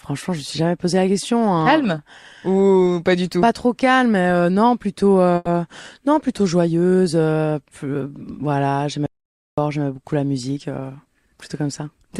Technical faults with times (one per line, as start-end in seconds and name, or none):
5.35-5.48 call audio freeze
9.06-9.58 audio dropout to silence
10.49-11.95 jitter buffer speed-up